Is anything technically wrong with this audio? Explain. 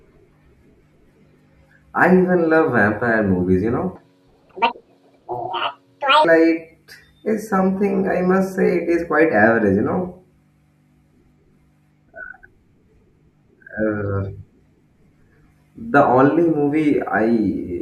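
Yes. A section at the wrong speed runs from 3.95 to 6.25 s. Across that stretch the speech plays back at 1.85 times its recorded rate, likely because the segment was run against the wrong clock during editing or playback. Speed and pitch rise together and snap back at the boundaries: the speech turns sharply hurried and high, lifted by about ten semitones, then drops to normal pace and pitch at 6.25 s.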